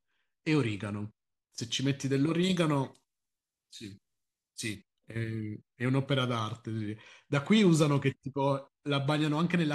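Speech with pre-emphasis left on from 2.43 to 4.75 s: an FM 75 µs treble lift, about 14 dB at 10 kHz, rising steadily above roughly 2 kHz, not a narrow sibilance peak.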